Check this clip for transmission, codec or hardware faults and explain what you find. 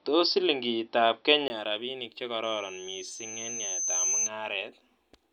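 Two faults are audible.

From 0.0 to 1.5 s the sound is dull and boxy, with nothing above 5.8 kHz. A 20 ms gap marks the change back. This is likely an input switched to a poorer device. The level also shifts by around 5 dB. A different noise floor sits far below the signal.

From 2.43 to 4.30 s there is a loudspeaker feedback squeal at 6.2 kHz. The microphone picks up its own loudspeaker, and the loop gain exceeds one at that frequency. The tone swells over about a second and a half. It peaks roughly 10 dB above the speech.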